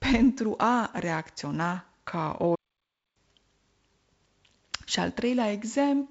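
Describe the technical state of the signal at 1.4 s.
At 1.4 s the speech is intact, with no fault at that moment, only the light hiss of G.722 wideband telephone coding and nothing above about 7.7 kHz.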